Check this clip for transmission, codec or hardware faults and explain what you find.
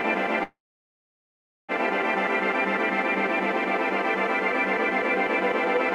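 One fault in this music clip. Call audio freeze, 0.43 to 1.72 s: packets were likely stalled and the jitter buffer ran dry. A brief fading tail leads into about 1.1 s of silence, then the music resumes where it stopped, nothing lost but running 1.25 s late.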